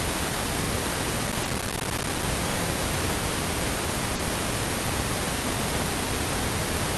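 At 0.64 to 0.68 s, and again at 2.52 to 2.56 s and 5.38 to 5.42 s, a repeated buffer occurs. Fresh audio arrived late, so the output replayed its last block of about 43 ms once more, which fits a 2048-sample buffer. Each instance is a brief stutter with a hard join. A waveform shows an identical segment twice in a row with a step at the seam, and a spectrogram shows a thin vertical line there.

From 1.27 to 2.23 s, processor overload crackle rides on the sound. The processor kept missing deadlines for tiny buffers of a few milliseconds, dozens of them across this stretch, and each miss left a short silent gap with hard edges. The result is a gritty tearing. On the waveform it appears as many short dropouts, and on the spectrogram as dense broadband vertical streaks.

Inside that stretch, at 1.43 to 1.47 s, there is a short concealed packet loss. A 20 ms hole was filled by continuing the preceding sound and then blending back in. 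A second one follows at 4.15 to 4.21 s, where 40 ms was filled. Each is heard as a brief smear or wobble. A spectrogram shows harmonics frozen or blurred over the gap, and the waveform looks unnaturally smooth and repetitive there. Throughout the clip, the call path's Opus coding limits content to about 12 kHz, which fits a 48 kbps setting.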